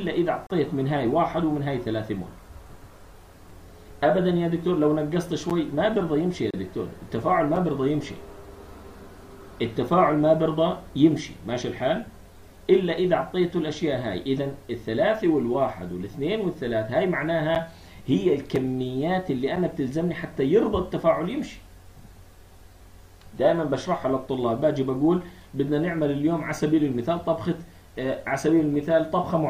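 Timestamps between consecutive one-second stream segments fail to meet, so the player fills each gap between stream segments with silence. The result is a hard-edged dropout at 0.47–0.50 s (about 34 ms), 3.50 s, 5.50 s, 6.51–6.54 s (about 30 ms), 7.56 s, 17.55 s, 18.56 s and 19.56 s. The holes fall on one-second boundaries and leave no sound missing.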